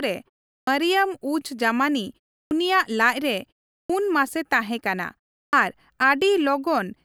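Clipped starts after a pause occur at 0.57 s, 2.42 s, 3.80 s (just before "ᱢᱟᱥᱮ ᱛᱟᱦᱮᱸᱠᱟᱱᱟ") and 5.44 s (just after "ᱢᱟᱥᱮ ᱛᱟᱦᱮᱸᱠᱟᱱᱟ"). Each follows a gap of about a third of a second, long enough for the output path to idle, and it takes 90 to 103 ms to come back. The speech therefore enters abruptly, missing its first sounds. On a waveform, the envelope jumps straight from flat silence to full level. A spectrogram shows the onset energy cut off square.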